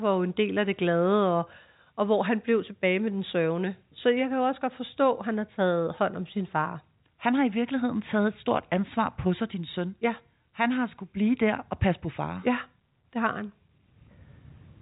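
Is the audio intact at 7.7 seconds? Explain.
Yes, the audio is intact at 7.7 seconds, with no dropout, click or distortion at that moment, only the usual telephone band limit of the G.711 coding, which stops everything above about 3.8 kHz.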